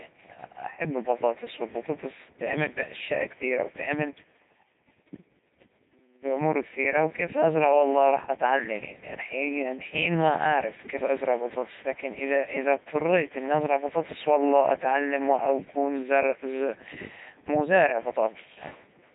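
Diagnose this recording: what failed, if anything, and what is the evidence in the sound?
The codec stage failed: the whole speech clip has been through a Codec 2 vocoder, with heavy damage. The voice is rebuilt from sine waves, so it sounds buzzy and robotic from start to finish, which fits Codec 2's 3.2 kbit/s mode. Unlike packet loss, nothing drops out; the synthesis itself is audible throughout.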